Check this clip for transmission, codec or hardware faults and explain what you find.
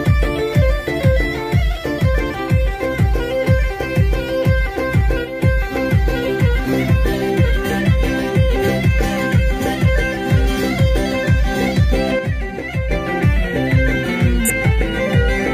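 Two kinds of fault are present: a one-sided channel loss heard twice, and a single forward jump near the end.

One channel drops out from 5.25 to 5.42 s and again from 12.19 to 12.91 s. Each time the level sags by about 6 dB. The likely cause is one stereo leg going silent before a mono fold-down, halving the shared signal.

A stream segment is skipped between 14.45 and 14.50 s. The audio lurches ahead with a brief blip and loses continuity, most likely because one chunk of a segmented stream failed to arrive and playback carried on from the next one.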